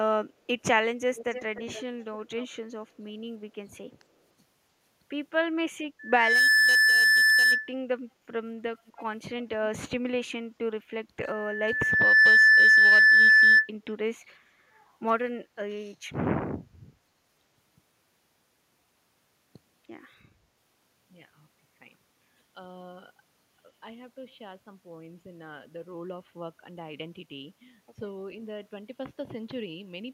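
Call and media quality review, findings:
Echo leak: delayed speech copy about 0.30 s behind the talker, at 1.15–1.84 s (about 20 dB down), then faint scraps at 2.37–2.46 s and 8.96–9.03 s (about 30 dB down). Likely far-end speakerphone echo canceller not fully suppressing its microphone pickup. Spectrogram shows faint duplicated speech patterns offset 296 ms.

Loudspeaker feedback squeal: 1.8 kHz tone at 5.99–7.73 s (swells over roughly 0.4 s, peaking around 10 dB above the speech) and 11.20–13.69 s (slower, roughly 1 s rise, around 15 dB above). Mic–speaker loop gain above unity at 1.8 kHz. Spectrogram shows a bright horizontal line; the waveform envelope swells steadily.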